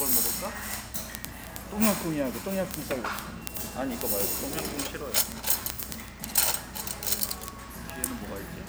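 From 0.13 s to the end, word clock ticks sound every 30 ms or so. An unlocked digital receiver slips one sample each time, giving sharp, uneven clicks.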